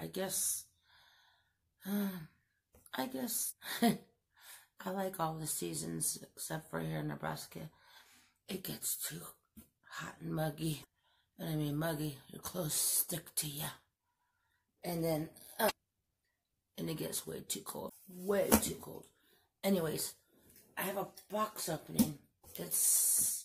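You get five short glitches, at about 3.46, 10.80, 15.66, 17.86 and 22.40 s, each lasting roughly 40 to 55 ms. They're damaged data in a compressed stream: bits of the encoded data got corrupted, so the decoder can't make sense of those frames and loses its place until it finds the next frame header. Each one comes through as a quick chirp, squawk, click or short hole cutting into the sound.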